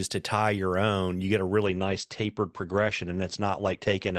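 Adaptive stream at a lower bitrate from 1.65 s to the end of this speech clip: the quality falls suddenly and without a gap and codec artefacts rise, which fits the stream switching from Opus at 64 kbit/s down to 16 kbit/s after a connection slowdown.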